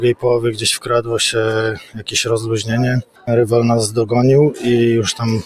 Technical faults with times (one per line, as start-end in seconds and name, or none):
0.00-5.46 noise suppressor applied to music or sounds
0.52-1.11 sound cut by the noise suppressor
1.72-2.12 sound cut by the noise suppressor
3.02-3.29 sound cut by the noise suppressor